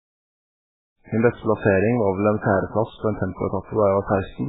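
Throughout, the speech sounds watery and swirly with nothing above 3.8 kHz, likely heavy MP3 compression at a very low bitrate, around 8 kbps.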